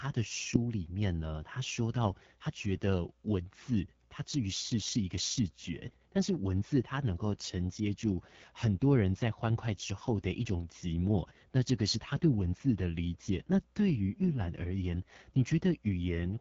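Throughout, the speech carries AMR wideband (HD Voice) codec damage: a rough, raspy coarseness pointing to one of its lowest rates, around 8.85 kbit/s. A spectrogram shows nothing above 7.5 kHz, smeared harmonics, and a noise-like, structureless band between 6.4 and 7 kHz.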